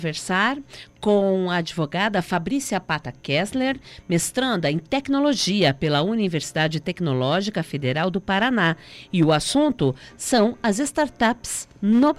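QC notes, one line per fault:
No faults heard anywhere in the audio.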